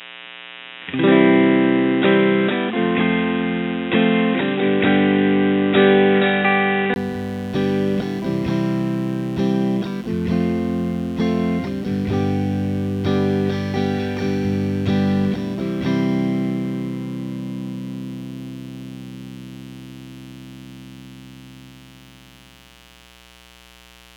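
From 0.0 to 6.96 s the sound is dull and boxy. Nothing reaches above 3.8 kHz. The input was likely switched to a poorer device here. A faint hiss lies far beneath. At 6.96 s a 20 ms gap occurs, then the full band returns, about 5 dB different in level.

A mains buzz runs through the whole clip. It is built on 60 Hz and its harmonics. Sharp switching spikes, two in every mains cycle, leak into the signal. The result is a steady, raspy buzz, roughly 25 dB below the sound.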